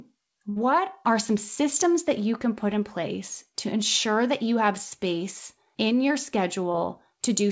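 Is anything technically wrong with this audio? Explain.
Yes, there are two dropouts in this call audio. The first is a burst of packet loss from 0.50 to 0.58 s, just before "are some systems that": the receiver stretched the last sound and faded it, so you hear it held and fading and then skip ahead. The second is a short concealed packet loss at 6.72 to 6.76 s, right after "have space in your". About 20 ms was patched by continuing the previous sound, which leaves a brief smear or wobble. Both sit on a call path with nothing above 8 kHz, which fits a wideband codec like G.722.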